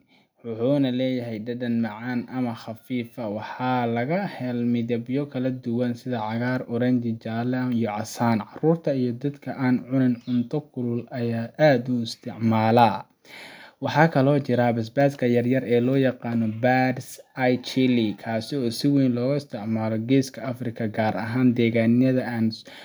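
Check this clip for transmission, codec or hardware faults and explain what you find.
One fault is audible: automatic gain rising. It runs from 0.41 s to 11.6 s. Over that stretch the level climbs by about 8 dB. The automatic gain control judged the incoming speech too quiet. So it kept turning its gain up, slowly, across those eleven seconds. The effect is a steady swell rather than a jump. The voice and the background noise get louder together, because the control lifts everything it receives.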